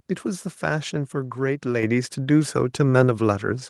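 At 1.83 s the microphone volume steps up: the call software judged the input too quiet and raised the device's capture level in a single jump of about 6 dB. The speech and the room noise beneath it become louder at the same instant. That shared, instantaneous rise sets it apart from a talker leaning closer to the microphone, which would lift the voice gradually and change its tone while leaving the background level where it was.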